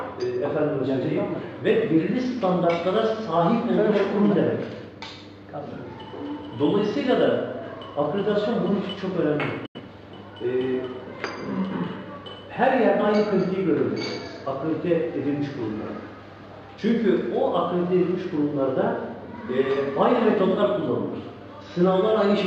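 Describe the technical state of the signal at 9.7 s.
At 9.7 s the signal is in a digital broadcast dropout, running from 9.66 to 9.80 s. The receiver lost valid frames and muted. The sound fades out over about 8 ms and the gap then holds silent. Roughly 85 ms of programme is missing, which fits two lost frames.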